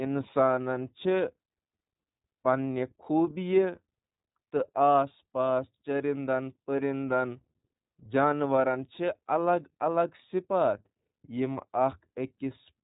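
From start to finish the speech runs through the iLBC codec, and the damage is plainly audible. Nothing gets past about 3.8 kHz, so it's dull and boxy. Each 30 ms frame is coded independently, giving a rough, slightly synthetic edge that fits the 13.33 kbps mode.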